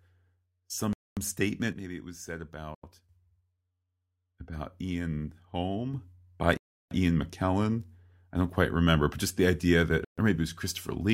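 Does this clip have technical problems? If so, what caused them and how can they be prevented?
Yes. The speech cuts to dead silence four times: at 0.93 to 1.17 s, 2.75 to 2.83 s, 6.57 to 6.91 s and 10.05 to 10.18 s, lasting between 87 and 339 ms. The likely cause is a Bluetooth stall, where interference delayed packets and the headphone buffer emptied until resent data arrived. Unlike a dropout from a failing cable, the gaps are fully silent and playback resumes cleanly. Keeping the phone close and away from Wi-Fi congestion, or using a larger receive buffer, prevents this.

The level also steps abruptly twice. At 1.72 s it falls by about 7 dB and returns at 3.09 s, and at 5.94 s it rises by about 6 dB until the end. This is likely a sudden gain jump, where digital gain changed between one sample and the next without a ramp. Because the background noise shifts along with the speech, it can't be a change in how loudly someone spoke. 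Applying gain changes through a short fade avoids it.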